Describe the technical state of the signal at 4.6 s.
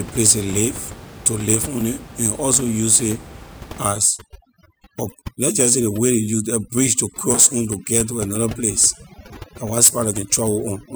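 Overdone noise removal is active at 4.6 s, within a stretch running from 3.93 s to the end of the clip. The suppressor is set so aggressively that it pulls individual frequency bands down or out whenever they sit near its noise estimate. The room noise, about 17 dB below the speech, drops and breaks up into twinkling specks, and quieter parts of the speech vanish along with it.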